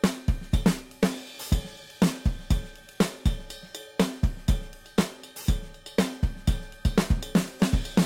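Throughout the audio there is sample clock jitter: the converter's clock wanders, so each sample is captured a little early or late, here by something like 7 microseconds rms. The resulting error scales with how steeply the waveform is changing, giving a rough hiss roughly 25 dB below the signal that swells on loud, bright passages and disappears in quiet gaps. A steady noise floor would stay put in the silences.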